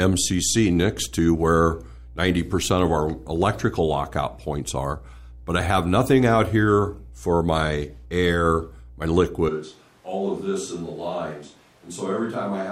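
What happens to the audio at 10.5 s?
At 10.5 s the speech sits inside a switch to a distant microphone that begins abruptly at 9.49 s and runs to the end. The close pickup has likely dropped out, so the sound turns roomy and hollow, loses bass, falls roughly 10 dB, and gains a room-noise floor around 30 dB below the speech. On the waveform the envelope steps down sharply at 9.49 s; the spectrogram shows thinner low frequencies, smeared reverberant tails and a raised noise haze between phrases.

Mains hum at 60 Hz also continues through this moment, as it does across the whole clip, a steady low tone about 20 dB under the signal from power-line coupling such as a ground loop. A spectrogram shows it as an unbroken horizontal line at 60 Hz with some low harmonics above it.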